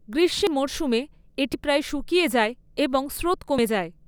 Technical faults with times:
0.47 dropped buffer (overrun)
1.54 dropped buffer (overrun)
3.58 dropped buffer (overrun)

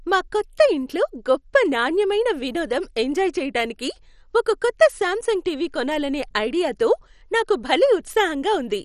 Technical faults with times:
0.00-8.85 MP2 compression

